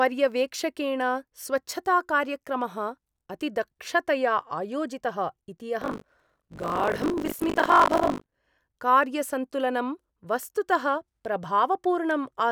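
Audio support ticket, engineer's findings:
Robotic 50 Hz buzz/rattle on speech, 5.8–8.34 s, signal-dependent. Buffer tearing, playback ring buffer: writer/reader slipped, crossing every ~20 ms period; about a third of each buffer replays audio roughly 40 ms old, hard joins both sides.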